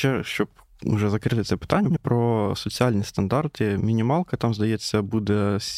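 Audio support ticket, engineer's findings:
Frames out of order, 1.85 to 1.97 s, between "закрити це" and "про соціальні стандарти". Garbled flutter. Two adjacent blocks of about 52 ms swapped, fitting two-frame runs. Likely packet reordering upstream of decoder. No time lost.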